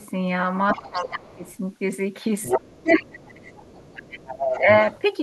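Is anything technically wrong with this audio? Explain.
Yes. Two echo-related faults appear in this speech clip.

Other side's voice leaking through, at 0.00–0.06 s, 0.68–1.55 s and 2.42–5.02 s: a second voice sits under the talker, faint at first (roughly 35 dB down), then nearer 20 dB and finally only about 10 dB below. It is likely residual loudspeaker echo the canceller failed to remove. On a spectrogram it shows as a second, fainter harmonic pattern overlapping the main one.

Speech suppressed in double talk, at 0.74–1.47 s, 2.53–3.47 s and 4.60–4.68 s: the talker's level sinks while the far side speaks, by roughly 15 dB, then a deep 30 dB or so, then a slight 5 dB. This is likely the canceller ducking everything during simultaneous talk. The waveform envelope visibly caves in.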